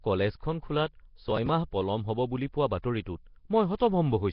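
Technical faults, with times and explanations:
throughout, Nellymoser compression: heavy rough, hissy haze and underwater smearing on the speech, likely from Flash's Nellymoser Asao codec near 22 kbps, which gives weak bands no bits and fills them with noise. A spectrogram shows blocky noise patches and a hard ceiling at 5.3 kHz.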